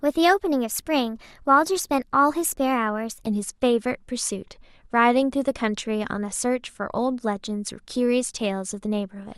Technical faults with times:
0.00-3.26 wrong sample rate

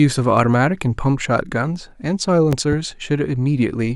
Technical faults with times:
2.53-2.75 loud pop

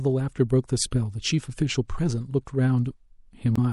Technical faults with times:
0.00-3.72 MP3 compression
3.54-3.58 damaged data in a compressed stream

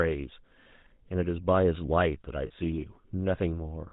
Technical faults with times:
0.00-3.93 GSM full-rate codec
0.64-0.67 lost GSM frames
2.46-2.51 lost GSM frames

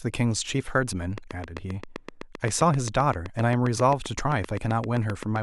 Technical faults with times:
1.18-5.37 train of clicks

